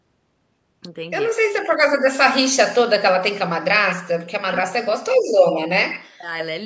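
A speech recording from a call, with content stopping at 8 kHz, carries two related faults. Echo leak appears as short delayed copies of the voice at 3.88–3.99 s, 4.54–4.60 s, 5.27–5.33 s, 5.51–5.60 s and 5.91–6.00 s, each trailing the original by 94 ms and sitting about 10 to 15 dB below it. The scrappy, intermittent character points to a far-end echo canceller that only partly removed its loudspeaker signal before sending the microphone feed back. Speech suppressed in double talk shows as the talker's level collapsing, by roughly 40 dB at its deepest, over 4.36–4.96 s and again at 6.11–6.31 s, the first while the echo is also present. The likely cause is the echo canceller failing to separate near-end speech from loudspeaker echo during overlap and attenuating everything at once.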